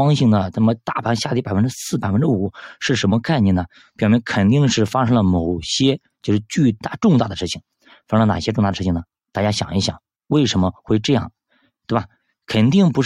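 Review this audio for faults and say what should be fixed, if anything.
No faults turned up in this audio, so nothing needs to be fixed.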